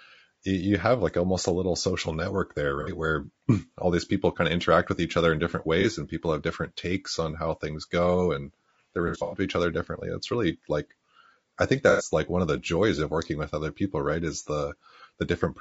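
Throughout, the speech sounds rough and grainy, with noise filling the gaps between harmonics and a thin, synthetic top band. That is plainly audible damage from low-delay AAC compression, likely AAC-ELD, whose short frames resolve pitch poorly; the grain fits a low rate near 32 kbps.

AAC frame loss with concealment produces brief smeared, phasey patches where the decoder repeats the last good spectrum. The first comes at 2.81 to 2.90 s after "little social network there" and lasts 60 ms. The next, 30 ms long, falls at 5.81 to 5.85 s between "each other in different" and "and people have different". The longest is at 9.08 to 9.40 s, after "things go and they" and before "to each other differently": 180 ms of gaps spread over 240 ms, the longest lasting about a tenth of a second. The last, 90 ms long, comes at 11.90 to 12.04 s.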